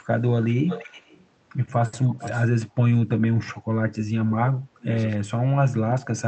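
From 0.11 s to the end, faint ticks repeat at a steady pace, around fourteen a second. These are clock slip clicks. Each tick is one sample dropped or repeated. The likely cause is two devices running on free clocks, off from each other by roughly 400 parts per million. The error builds to a whole sample about every 70 ms, and each time the stream jumps. The ticks show most on louder, sustained speech.

From 0.67 to 1.26 s, a delayed copy of the speech trails the original. It returns between 2.02 and 2.47 s. This is echo leak. The copy lags by 340 ms and sits about 15 dB under the direct speech. It likely comes from a far-end loudspeaker feeding its microphone, with that side's echo canceller missing part of it. The leaked audio was then sent back down the line.

Between 3.9 and 4.89 s, the speech dips and breaks up in pieces. This is speech suppressed in double talk. About 700 ms of that span is affected. 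At the deepest point, the level falls by roughly 35 dB. Both sides were likely talking at once. The echo canceller could not tell this talker from the loudspeaker echo. It turned everything down, so the speech thins and cuts out.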